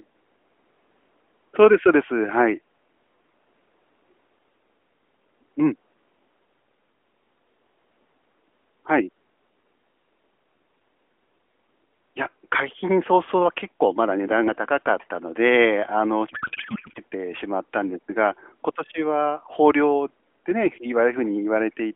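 From 16.30 to 17.00 s, the speech collapses into garbled noise and warble that barely tracks it. This is a codec payload misread: the AMR-NB frames, whose sound fits the 12.2 kbps mode, appear octet-aligned but are parsed as bandwidth-efficient, so every field decodes from the wrong bits.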